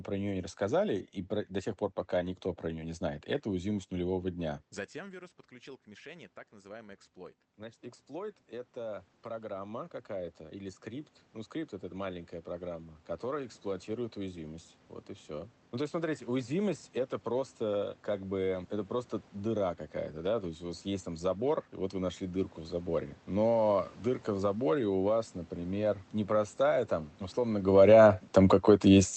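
From 4.93 s, just after "это уязвимость нулевого дня", automatic gain rising sets in. The talker has moved back from the microphone and the input has dropped by about 18 dB, so the gain control slowly lifts its gain by about 14 dB over the next eleven seconds, until 16.21 s. The level creeps back up and the room noise swells along with the voice. That shared rise marks it as gain action and not the talker coming closer again.

At 26.61 s, after "заборе у вас например", automatic gain falling begins and runs to the end of the clip. The input has turned too loud, or its background noise too strong, so the sound sinks steadily as the gain is pulled down. The talker shifts position again around 27.5 s, but the background drops together with the voice, which a change in distance alone would not cause. Throughout, the Opus call path limits the top end to about 8 kHz.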